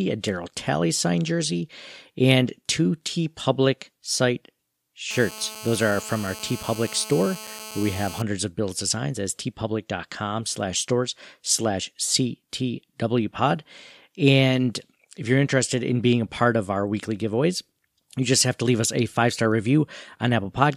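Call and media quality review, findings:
GSM phone buzz, 5.11 to 8.22 s. Hard, raspy buzz at about 217 Hz with a stack of harmonics, sitting about 15 dB under the speech and nearly steady. Nearby 2G handset mid-call, TDMA bursts rectified in the mic or preamp stage. Check shielding.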